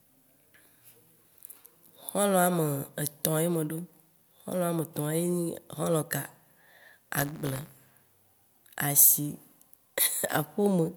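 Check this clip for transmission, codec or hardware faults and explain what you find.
There's one fault, buffer tearing, from 7.16 to 7.97 s. The writer and the playback hardware have drifted so they cross mid-buffer, splicing in a small sliver of audio about a lap old, roughly 20 ms. Those hard joins give a rattly 100 Hz buzz over the speech.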